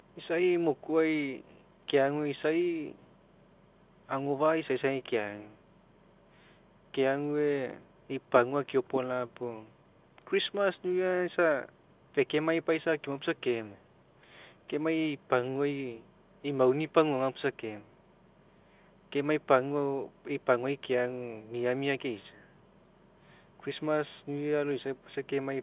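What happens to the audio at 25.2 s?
Nothing goes wrong at 25.2 s; the speech carries on intact there, still passing through the narrowband G.711 telephone coding without any break, click or added distortion.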